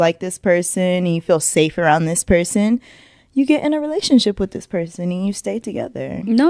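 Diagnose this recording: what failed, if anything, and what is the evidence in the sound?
Nothing failed: the recording contains no fault, and there is no evidence of one in the sound.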